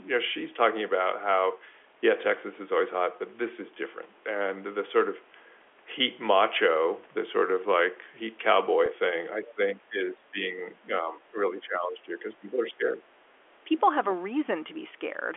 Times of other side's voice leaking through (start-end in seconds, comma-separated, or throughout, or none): 13.84-13.88